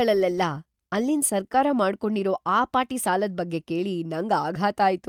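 Listening through this short speech recording, nothing stood out as a technical problem.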